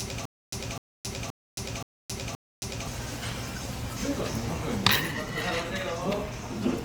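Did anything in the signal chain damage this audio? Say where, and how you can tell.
Yes. A stutter with silent gaps runs from the very start to 2.87 s. A burst of about 254 ms repeats five times, each followed by roughly 270 ms of digital silence, on an even 524 ms cycle. The stage is likely the playback or streaming buffer. Each time it stalled and retried, it replayed its last fragment and then ran dry. The audio that belonged in those gaps is gone.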